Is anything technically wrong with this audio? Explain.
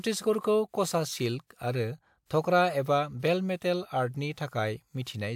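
Yes. Pre-echo appears from 2.26 to 2.30 s: the transform codec spread quantisation noise sized for a sharp speech onset across its whole block, so about 48 ms of hiss fills the quiet just before that attack, which then sounds blurred and softened.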